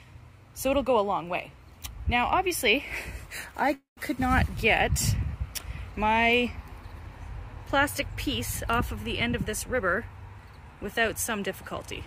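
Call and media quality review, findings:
Call audio freeze, 3.73 to 3.99 s. Likely jitter buffer underrun after delayed packets. Receiver extends the last sound as a fading buzz, then about 140 ms of silence. Playback resumes where it stopped. Nothing lost, delay up 234 ms.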